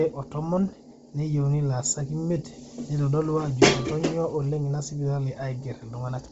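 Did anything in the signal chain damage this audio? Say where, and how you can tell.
Yes, at the codec stage, and throughout the speech rather than at any one moment. Nothing reaches above about 7.8 kHz, and what remains near that ceiling has a breathy, grainy, noise-filled texture. That points to likely Bluetooth LC3 compression at a low rate, around 24 kbps with short 7.5 ms frames. The transform codec discards upper-band detail and substitutes synthetic noise. A plain low-pass filter would sound dull but clean, not grainy.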